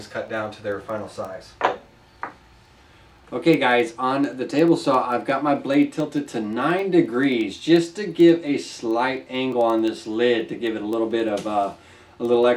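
Word clock ticks run from 0.10 s to 12.52 s, at roughly ten per second: a receiving device on its own clock, about 200 ppm off the sender's, drops or repeats a single sample each time the clocks slip, leaving sharp ticks of uneven strength throughout.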